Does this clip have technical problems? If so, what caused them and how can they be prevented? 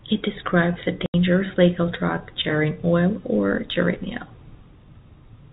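Yes. From 1.06 to 1.14 s, between "describes a" and "legal drug", the speech drops into an 80 ms hole with hard edges. This is packet loss filled with silence, and the length fits four consecutive 20 ms packets lost. The receiver simply muted the gap. The G.711 telephone band-limiting below 4 kHz is expected for this path. Enabling packet loss concealment and a jitter buffer with forward error correction would mask or recover such losses.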